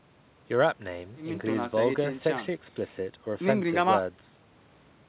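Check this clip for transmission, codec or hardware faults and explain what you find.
No transmission, codec or hardware faults are heard here.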